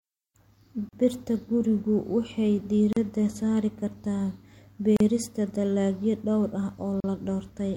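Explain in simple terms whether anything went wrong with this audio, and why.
The speech was encoded in separate two-second pieces and joined untrimmed, leaving a gap at a join of encoded pieces each time. A gap of about 38 ms cuts in at 0.89, 2.93 (after "gurigu waxay"), 4.97 (before "dalagyo dhowr ah") and 7.00 s (after "dalagyo dhowr ah"), then the sound resumes.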